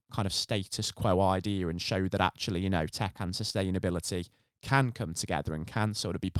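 Nothing technical goes wrong anywhere in this bit of speech; there's no fault to point to at any moment.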